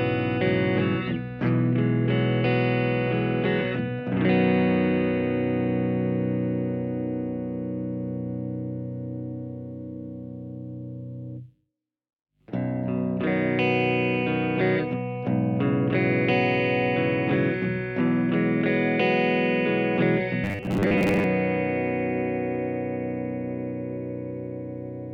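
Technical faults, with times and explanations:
20.44 to 21.24 s, robotic sound from repeated short buffers: a rigid, metallic 100 Hz buzz. Likely a 10 ms chunk repeating, replacing about half the audio.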